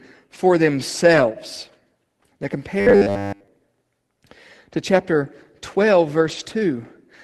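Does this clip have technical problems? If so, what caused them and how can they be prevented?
Yes. Around 1.13 to 1.23 s and again from 6.23 to 6.45 s you get lost packets rebuilt from error correction. Packets went missing, and the decoder filled in from the low-bitrate backup copies that Opus tucks into the next packet. So there's no dropout, just a rougher, noisier patch of about 60 ms and then 120 ms, which points to roughly three and then six packets. Turning up Opus's expected packet loss setting gives the backup copies more bits, though a steadier network is the real cure.

From 2.79 to 3.48 s the sound goes robotic from repeated short buffers. It's a rigid metallic buzz at 100 Hz that still loosely tracks the speech, because most of that stretch is short 10 ms chunks replayed while fresh audio was skipped. The likely cause is new audio reaching the player too infrequently, so it kept looping the last buffer. 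A deeper jitter buffer and steadier capture and playback scheduling should stop it. The Opus call path itself, at 24 kbps with audio up to 12 kHz, just adds its usual coding texture.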